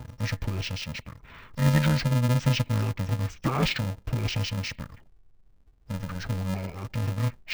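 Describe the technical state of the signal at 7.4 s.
At 7.4 s the speech still has interleaved audio read as planar, present throughout. Blocks of about 2.67 ms, which fits a 128-sample block, are split into half-speed left and right halves, giving a dull, robotic buzz at 375 Hz. On a spectrogram this appears as steady bands at multiples of 375 Hz.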